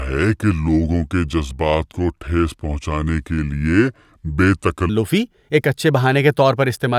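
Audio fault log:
0.00–4.89 s: section at the wrong speed, speech running at 0.738× so it drags and drops about five semitones, likely from playback against a mismatched clock.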